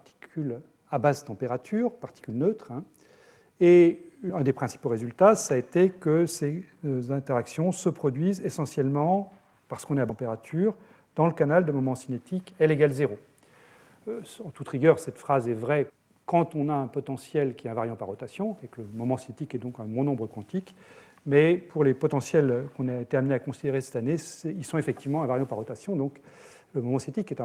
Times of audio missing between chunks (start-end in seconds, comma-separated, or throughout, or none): 15.90, 21.70